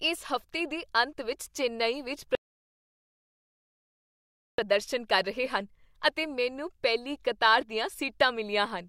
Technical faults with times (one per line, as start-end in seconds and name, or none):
2.35-4.58 rebuffering stall